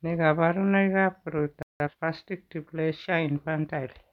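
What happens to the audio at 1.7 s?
A playback stall runs from 1.63 s to 1.80 s. The speech cuts out mid-flow and the output drops to silence for about 176 ms before picking up again. The likely cause is the player briefly running short of data, or its audio thread being held up, so nothing reached the output until it recovered. The gap is long enough to hear as a distinct hitch rather than a click.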